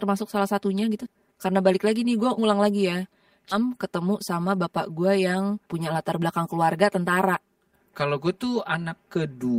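Throughout the speech there is a hollow, phasey colouring, as if heard down a tube. This is channel delay (comb filtering). One channel runs about 5 ms behind the other, and when the two are summed to mono, the shared content cancels at evenly spaced frequencies. The first notch falls somewhere near 100 Hz, with further notches repeating up the spectrum, which thins and dulls the sound.

Just after "gue ngulang lagi ya", between 3.51 and 3.62 s, the audio lurches forward with almost no gap. This is a skip ahead. Something like 700 ms of audio is simply gone, and the two sides are butted together. A stretch was dropped, most likely by the jitter buffer discarding audio while later audio was already queued.

From 4.09 to 4.64 s the speech sounds slightly rushed at unchanged pitch, running at 106% speed. From 5.50 to 6.38 s, ending just before "keluarga tentara", it hurries more noticeably, at 109%. 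Both are jitter buffer speed-ups. Having built up more audio than it wanted, the receiver trimmed many short pitch-period slices in a row to shed the delay. That removed about 40 ms in the first stretch and about 70 ms in the second.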